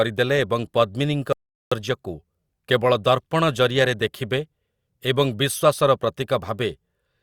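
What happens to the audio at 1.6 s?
At 1.6 s the input feed was likely lost, with the recorder writing silence in its place. This audio dropout to silence runs from 1.33 to 1.72 s, right after "ଏବଂ ପଦ୍ମିନୀଙ୍କ". The speech cuts off and about 0.39 s falls into dead, room-tone-free silence.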